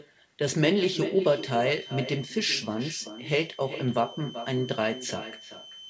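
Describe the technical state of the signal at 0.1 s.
Echo with no canceller is present at 0.1 s and runs through the whole clip. The far end plays the call over a loudspeaker, its microphone picks that playback up, and nothing subtracts it, so the speech returns after the network round trip. Here a quieter copy, about 12 dB below the direct speech, trails it by roughly 0.4 s, sounding thinner, within a band that stops at 8 kHz as a G.722 call path would.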